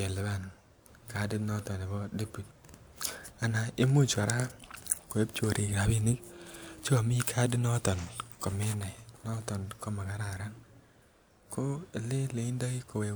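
No technical faults are audible.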